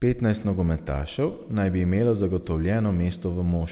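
Nothing stood out on listening to this speech, which comes through a telephone-grade call path with nothing above 4 kHz.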